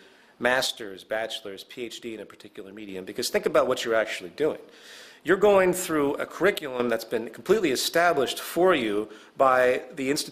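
A sudden gain jump, likely a gain setting applied without a ramp, drops the whole signal, background included, by about 6 dB from 0.67 to 2.89 s, then by about 9 dB from 6.58 to 6.80 s, with level snapping back abruptly each time.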